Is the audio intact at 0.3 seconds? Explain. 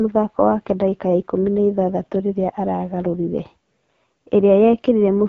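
No. At 0.3 s the speech carries the AMR-WB (HD Voice) codec damage heard across the whole clip. At 8.85 kbit/s the pulse-driven vocal model is starved of bits, so the voice sounds rough and raspy. Above 6.4 kHz there is only shaped noise, and nothing above 6.9 kHz.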